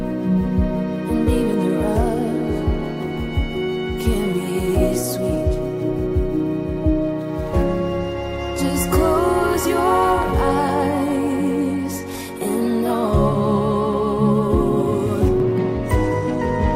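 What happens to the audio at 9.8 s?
Right around there you're inside a train of clicks that runs from about 9.54 to 10.70 s. There are roughly five sharp pops at an uneven pace, about 3.5 a second, each poking a few dB above the surrounding sound. They all have much the same shape, which points to something outside injecting a repeated pulse, likely interference from nearby gear or a faulty connection or power supply. You hear it as ragged ticking laid over the audio.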